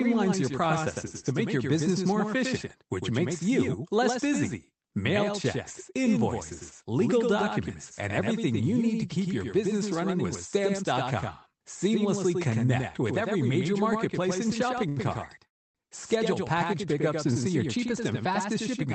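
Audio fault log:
Throughout: doubled audio track. There's a second, full-band copy of the speech trailing roughly 100 ms behind and about 5 dB quieter, with no reverb tail or room colour on it. That's most likely a second capture path running late, or an edit leaving two copies out of step.
14.89–14.98 s: short stall from a late packet. A sound gets held about 77 ms too long, with a slight buzz or dip. A packet turned up late, the jitter buffer ran dry, and the receiver stretched the last bit of audio until it arrived, so nothing's actually lost.
15.46–15.77 s: call audio freeze. The audio stops and goes to about 280 ms of silence, then picks up right where it left off. It sounds like a gap was inserted rather than anything cut, likely because packets were held up in transit and the jitter buffer emptied.
17.53–18.87 s: jitter buffer speed-up. Right after "package pickups and see", the speech runs about 8% fast at the same pitch and sounds a bit rushed. 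The buffer had piled up extra audio, so the receiver trimmed short pitch-period slices, roughly 100 ms in total, to cut the delay back down.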